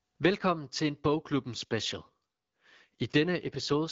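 At 3.43 s an AMR rate drop sets in. The speech turns rougher and more synthetic with the band unchanged, which fits AMR-WB falling from 12.65 to 8.85 kbit/s.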